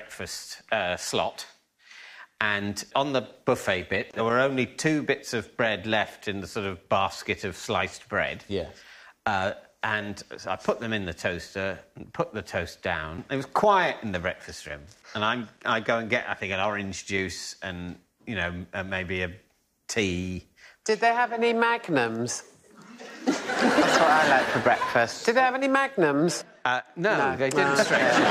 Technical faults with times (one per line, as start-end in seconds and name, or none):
4.11-4.13 gap at a join of encoded pieces